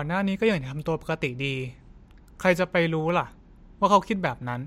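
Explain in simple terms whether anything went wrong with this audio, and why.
Between 2.92 and 3.27 seconds the speech picks up three small, evenly spaced ticks, each under a millisecond. These are CD scratch ticks: a scratch on the disc spoils data on each turn, and the player patches over the damage.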